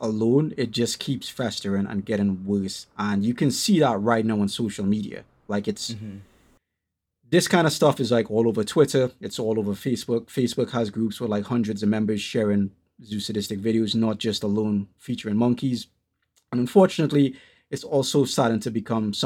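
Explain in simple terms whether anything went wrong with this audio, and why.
Clock slip clicks run through nearly the whole clip, from 0.11 s to 19.18 s: a soft, steady rattle of ticks roughly every 0.07 s, clearest when the speech is loud. The likely cause is two devices on unsynced clocks, a few hundred parts per million apart, so a single sample keeps getting dropped or repeated.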